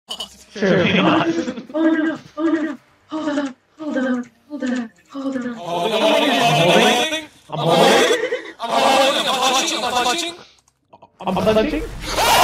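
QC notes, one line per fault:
Throughout: channel delay (doubling), one channel arrives about 93 ms late and sums to mono as an equal-level slap echo, consistent with a 4096-sample buffer offset.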